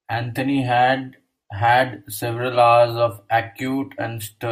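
Listening to the speech recording turned up nothing that stood out as a technical fault.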